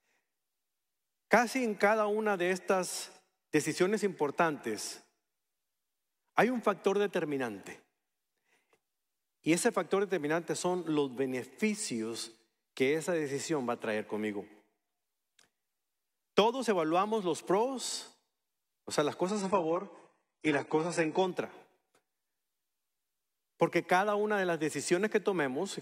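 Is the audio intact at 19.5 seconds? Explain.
No. An adaptive stream at a lower bitrate runs from 19.28 to 21.28 s: a slowed connection forced a leaner encoding, abruptly cutting everything above 11.1 kHz, without any gap.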